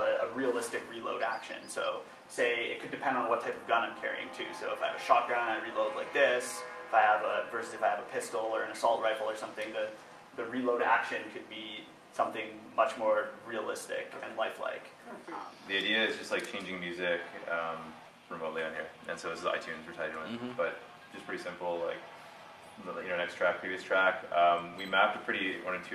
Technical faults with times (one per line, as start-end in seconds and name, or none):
none